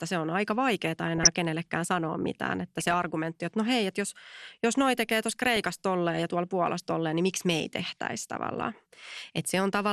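Dull, granular speech with a plainly audible gurgle runs through the whole clip, and the upper treble seems to come and go rather than sit steadily. That is the sound of MP2 compression, likely at a rate that fits an 80 kbps stream. MPEG Layer II divides the signal into 32 sub-bands and shares out bits among them. At this rate the high bands keep getting switched off, and the remaining bands are quantised coarsely enough to leave that grainy edge. Three short bursts of burbling break over the speech at 1.08–1.35 s, 2.79–2.94 s and 5.29–5.65 s. This is DAB burbling. Bit errors at a rate well under one percent slipped past error correction into the MP2 data, corrupting samples so individual sub-bands carry short blips of noise. The bursts hit 18, 7 and 15 damaged frames in turn.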